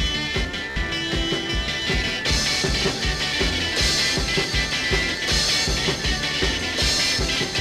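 Bluetooth stutter from 0.70 to 0.76 s: about 58 ms of audio went missing, which fits roughly four lost packets. The receiver kept replaying its last short buffer, giving a brief machine-gun repeat, then the sound resumes further on, as though it had kept playing.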